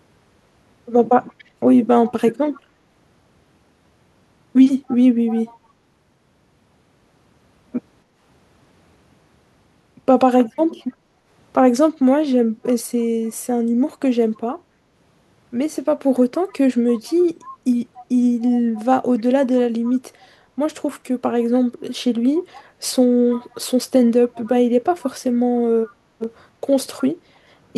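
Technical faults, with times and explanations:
1.38–2.61 s, 4.87–5.57 s, 10.54–10.59 s, 16.48–20.28 s and 22.41–25.94 s: echo leak. A faint copy of the speech trails it by 282 ms, about 20 to 25 dB down (a brief scrap about 40 dB down at 10.5 s). This is likely a far-end loudspeaker echo that the echo canceller only partly removed.
10.98–11.24 s: background gated by the echo canceller. The room sound dips by up to about 7 dB for roughly a fifth of a second, then recovers. The canceller pulled the microphone down while the loudspeaker played, then released it.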